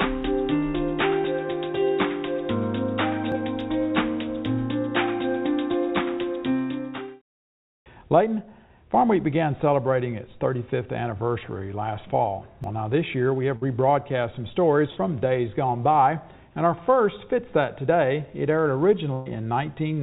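At 3.32 s and again at 12.64 s, the sound jumps forward, losing roughly 40 ms each time with no gap. This is likely a dropped buffer (overrun), where unread samples were overwritten.

Bursts of packet loss follow at 13.56 to 13.64 s, 14.90 to 14.99 s and 19.13 to 19.29 s, each about 60, 60 and 120 ms long. Unlike the jumps, the missing stretch is filled by a held, fading continuation of the last sound before it resumes further on. All of this sits within the narrow band of the call path, which carries nothing above 4 kHz.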